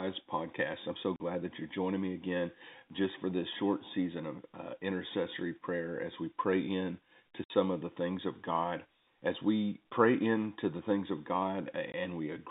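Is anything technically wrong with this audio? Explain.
Yes. The speech shows packet loss filled with silence: audio packets never reached the receiver, and it played digital silence in their place rather than concealing the gap. The holes fall at 1.16 to 1.2 s, after "podcast I'm so" and before "that you're joining me" (40 ms); at 7.44 to 7.5 s, after "we pray in to" and before "of the things of" (60 ms); and at 11.92 to 11.94 s (20 ms). All three lengths are multiples of 20 ms, which fits a 20 ms packet size. Each gap cuts the sound off abruptly. The narrow telephone band of the G.711 line can be heard throughout.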